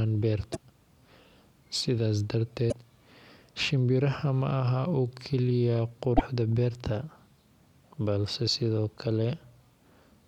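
At 0.51–0.57 s, 2.68–2.74 s and 6.15–6.21 s, damaged data in a compressed stream makes the decoder misread frames and lose sync, giving brief glitches in the speech; each shows as an abrupt, jagged waveform discontinuity.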